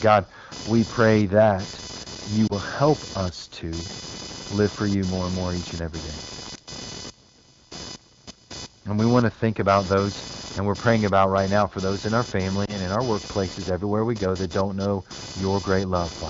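Computer activity noise runs throughout: a buzzing pulse train near 500 Hz, roughly 15 dB under the speech, shows as evenly spaced vertical striations rising and falling with machine load. At 2.47–2.52 s and again at 12.65–12.76 s, lost AMR speech frames cause a brief warble and dip, each consistent with one concealed frame. The waveform briefly shrinks, and the spectrogram's harmonics smear flat.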